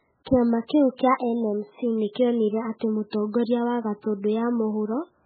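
From start to finish the speech sounds muffled and watery, with nothing above about 4.5 kHz and a swirling, metallic chirp smeared over the s sounds and the starts of syllables. This is likely heavy MP3 compression: starved of bits, the encoder has cut the treble at a fixed point and let weak frequency lines flicker on and off between frames, damage severe enough to fit a very low bitrate, around 8 kbps.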